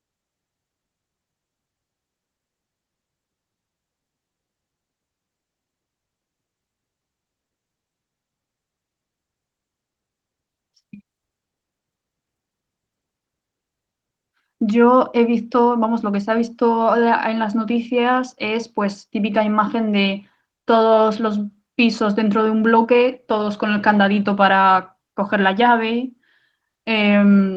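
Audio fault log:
No fault was found in this speech clip.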